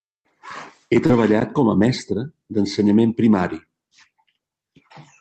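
Right around 1.06 to 1.10 s there's a short concealed packet loss. About 30 ms of the call didn't reach the decoder in time, so the receiver papered over the gap by extending the sound just before it and then crossfading back into the real signal. You hear it as a quick smear or little wobble in the speech. The rest rides on the call codec, which sounds like Opus with its top end stopping around 8 kHz.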